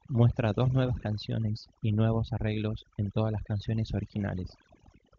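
From start to finish, the background sits at near silence broken by twinkling specks, and the speech has its softer edges hollowed out. This is overdone noise removal: a noise reduction stage set far too aggressively has pushed individual frequency bands down or out whenever they came close to its noise estimate, taking quieter parts of the speech along with the noise. The AMR wideband (HD Voice) coding beneath it adds little audible damage of its own, which fits a high AMR-WB rate.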